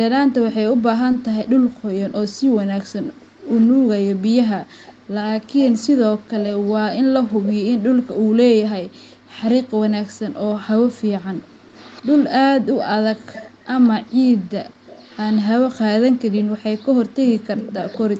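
Short concealed packet loss occurs at 1.11 to 1.15 s and again at 5.19 to 5.23 s. Each time, about 20 ms of speech arrived too late, and the receiver covered the gap by extending the preceding sound before blending back, leaving a brief smear or wobble.

Echo leak runs from 11.4 to 12.3 s and from 13.3 to 15.4 s. A faint copy of the speech follows about 193 ms behind, roughly 25 dB down. This is likely a loudspeaker on the far end whose echo canceller let some of its microphone pickup return.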